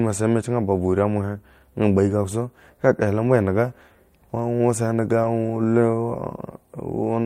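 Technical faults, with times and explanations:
5.23 to 5.29 s, lost packet rebuilt from error correction: About 40 ms of the speech turns rougher and noisier, yet nothing drops out. The texture fits two lost packets. Each packet that followed carried a low-bitrate spare copy of the missing one, as Opus in-band forward error correction allows. The decoder played those spares in place of the originals. That fills the gap, but with less detail, so the patch sounds coarse.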